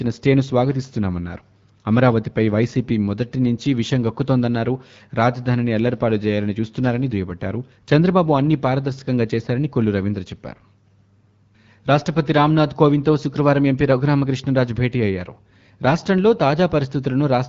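No faults found; the speech shows the expected signature of an AMR wideband (HD Voice) path at 12.65 kbit/s, with the band stopping around 7.5 kHz and only light codec coloration.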